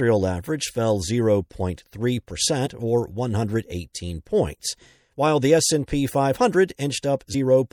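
MP3 compression runs throughout this speech clip, plainly audible as a watery, swirling quality with smeared consonant onsets and a dulled top end. The damage points to a low bitrate, around 64 kbps, as the likely cause: the encoder runs out of bits, so it cuts off the treble and lets weak frequency components drop in and out from one block to the next, which produces the unsteady, metallic texture.

Compressed frames skipped occurs at 2.65 s and again at 7.33 s. Each time, the decoder lost or rejected a chunk of the encoded stream and jumped ahead. About one frame, roughly 30 ms of sound, vanishes at the first point, and about two frames, roughly 50 ms, at the second, which fits a frame length near 26 ms. Because adjacent frames overlap, each join is heard as a short smeared blip and a small hitch in continuity rather than a sharp click.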